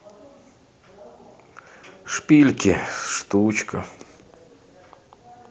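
From 2.9 s onward, a call bitrate drop, consistent with 32 falling to 16 kbps, coarsens the speech into a rough, watery sound; the spectrogram turns blotchy and smeared.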